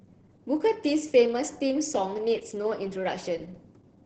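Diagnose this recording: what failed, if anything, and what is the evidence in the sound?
Codec stage: Opus voice compression throughout, fitting SILK near 10 kbps; the 8 kHz band and coarse excitation make the speech muffled, hoarse, slightly robotic.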